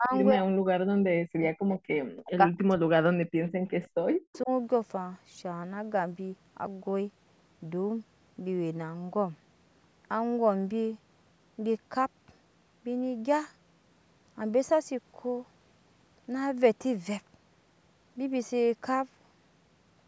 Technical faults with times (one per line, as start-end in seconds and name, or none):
0.00-1.43 speech suppressed in double talk
1.69-1.79 echo leak
2.22-3.37 speech suppressed in double talk
3.46-3.89 echo leak
4.13-4.50 speech suppressed in double talk
4.33-4.38 echo leak